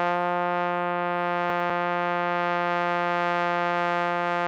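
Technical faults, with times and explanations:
1.5–1.7 s, chunks out of order: one 100 ms block of music plays a chunk late, so the passage jumbles, with three hard joins.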